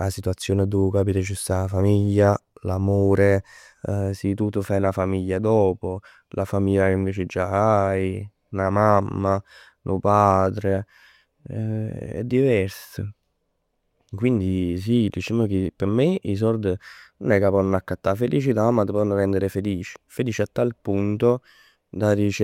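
No technical faults can be heard anywhere in the speech. There is nothing here to mark at any point in time.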